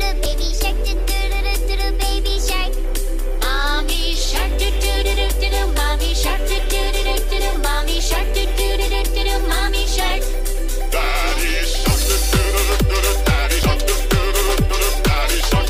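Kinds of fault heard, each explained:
Compressed frames skipped: whole coded frames never play, so the audio jumps ahead roughly a tenth of a second near 0.26 s and 13.63 s.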